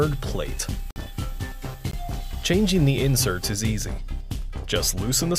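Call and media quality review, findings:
Block of digital silence at 0.91–0.96 s (about 53 ms, heard as a short hole) and 1.91–1.93 s (20 ms). Hard cut to silence and back, with no fade. Probable component is the audio output path, consistent with the buffer not being filled in time. It differs from packet-loss concealment, which would fill the gap with faded or synthesised sound rather than silence.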